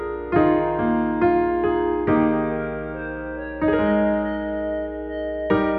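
Mains hum runs throughout: a steady 60 Hz tone, roughly 20 dB below the signal, from power-line coupling, showing as a constant horizontal line low on the spectrogram.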